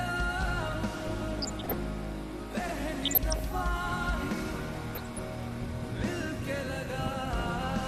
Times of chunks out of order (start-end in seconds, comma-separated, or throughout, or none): 2.60-2.72